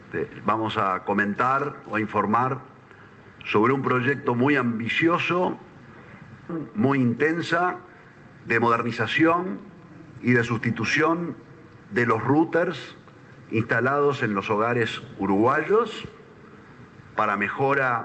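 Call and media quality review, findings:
Skip ahead at 6.5 s. Audio jumps forward with no gap, about a second missing. Audio likely dropped in transit or by an overflowing jitter buffer; both sides of the cut joined directly.

Jitter buffer speed-up, 6.63 to 11.18 s. Audio runs 112% fast at unchanged pitch and sounds hurried. The receiver trimmed pitch-period slices repeatedly, removing about half a second to shrink buffered delay.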